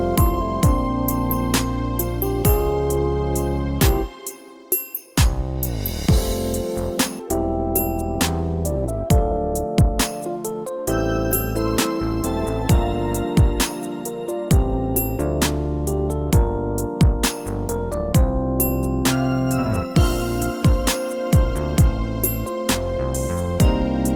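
A skip ahead occurs at 7.19 s: roughly 0.7 s of audio is missing, and the two sides are joined directly with no gap. This points to a stretch discarded in transit or by an overflowing jitter buffer, pulling playback about 0.7 s earlier.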